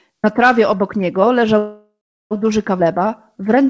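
Call audio freeze, 1.58 to 2.33 s, right after "trawie obok niego": the last sound carries on as a fading buzz or hiss, then about 0.37 s of silence, before the speech resumes exactly where it stopped. Delayed packets likely drained the jitter buffer, inserting a gap of about 0.73 s.

Skip ahead, 2.79 to 2.81 s: playback jumps forward with only a tiny join, dropping roughly a third of a second of speech. Later audio was already queued, so the stretch was discarded and the two sides butt together almost directly.

Jitter buffer slow-down, 2.84 to 3.68 s: the speech runs at 94% speed with unchanged pitch, sounding slightly drawn out. To rebuild its reserve, the buffer repeated single pitch periods and slices of pauses, adding 58 ms over this stretch. The audio carries nothing above 8 kHz, which fits a G.722 call path.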